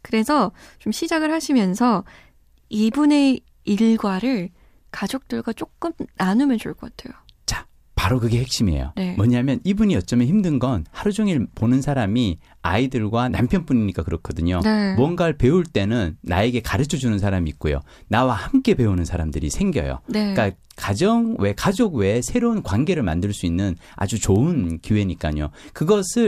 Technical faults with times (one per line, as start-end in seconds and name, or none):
none